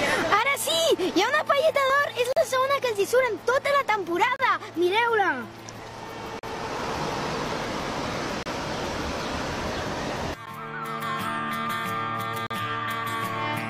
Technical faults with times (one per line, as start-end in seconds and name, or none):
2.33-2.37 gap between stream segments
4.36-4.39 gap between stream segments
6.39-6.43 gap between stream segments
8.43-8.46 gap between stream segments
10.46 gap between stream segments
12.47-12.51 gap between stream segments